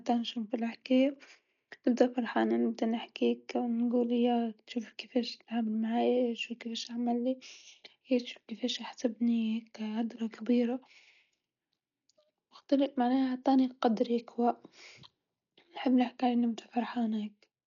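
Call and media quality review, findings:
Speech dull and band-limited throughout, nothing above 7 kHz. Rough, fluttering noise hugging voiced sounds; heavy codec damage. Likely cause: Dolby Digital compression at a starved bitrate, which fits roughly 48 kbps. Encoder dropped the top band and left many frequency lines without mantissa bits; decoder filled the gaps with dither noise, producing the flutter.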